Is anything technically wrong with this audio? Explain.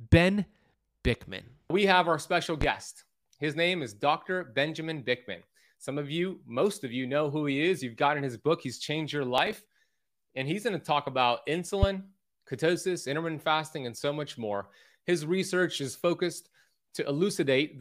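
Yes, there are two kinds of fault.

Loud pop, 2.61 to 2.65 s, just after "have our special", and again at 11.83 to 11.86 s, between "going to talk about" and "ketosis intermittent fasting and". A single sharp pop, about 15 dB above the speech, sits over talk that carries on beneath it. It is likely a voltage step from a plug, switch or static discharge.

Processor overload crackle, 9.38 to 9.79 s. The processor fell behind and missed about twenty buffer deadlines over this stretch, skipping each unfinished chunk. The hard-edged gaps, whose length fits buffers under a millisecond long, merge into gritty crackle over the speech.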